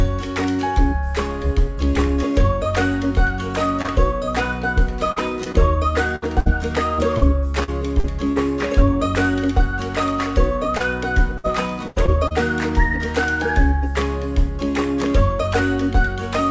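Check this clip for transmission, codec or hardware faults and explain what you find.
Two kinds of transmission fault are audible, both from packets lost on the way. The sound has nothing above 8 kHz, which fits a wideband G.722 call codec.

Short concealed packet loss occurs at 3.82 to 3.90 s (two back-to-back holes), 5.12 to 5.18 s, 5.44 to 5.48 s and 5.52 to 5.56 s. Each hole lasts 20 to 40 ms. The receiver patched each hole by extending the last sound, then blended back into the real signal. Each one is heard as a quick smear or wobble. A short sound may drop out.

Repeated packet loss (robotic sound) runs from 6.16 to 8.38 s and again from 10.78 to 12.34 s. Holes keep arriving, and each is patched before the next one hits. About 14% and 13% of those spans is filled-in sound. The longest hole is 62 ms in the first span and 82 ms in the second. The result is choppy, with pieces missing.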